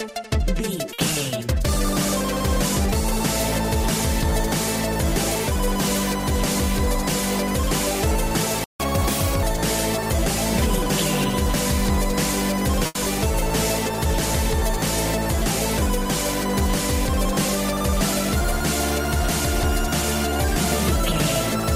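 Short stalls from a late packet occur at 0.93 to 1.00 s and 12.86 to 12.97 s. Each time a packet arrived late and the jitter buffer ran dry, so the receiver stretched the last sound, by 50 ms and then 90 ms, before resuming. Nothing is lost, but the sound is held with a slight buzz or dip.

A playback stall comes between them at 8.64 to 8.80 s. The output drops to silence for about 157 ms in mid-flow. The likely cause is the player running out of data or its thread being blocked.

Catch-up at higher speed runs from 8.80 to 9.43 s. The player resamples its backlog at 1.25 times normal speed to recover the lost time, so tempo and pitch both rise, the pitch by roughly four semitones, before settling back.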